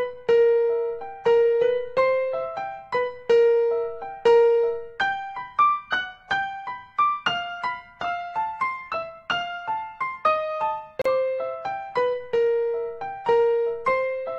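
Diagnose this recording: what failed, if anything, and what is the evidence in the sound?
A gap at a join of encoded pieces opens from 11.02 to 11.06 s: about 39 ms of silence cuts into continuous sound, with edges smeared by the codec, and the sound then resumes exactly where it left off. The failure is at the codec stage, when the file was assembled. Separately encoded segments were concatenated without trimming, so one run's final-frame padding and the next run's start-up delay both remained as silence at the join.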